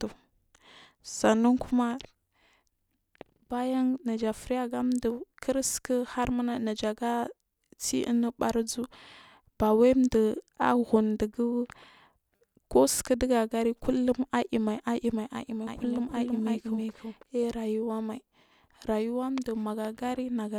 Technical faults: doubled audio track

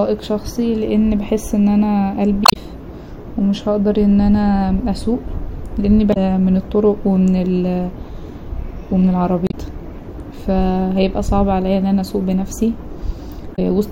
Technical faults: damaged data in a compressed stream

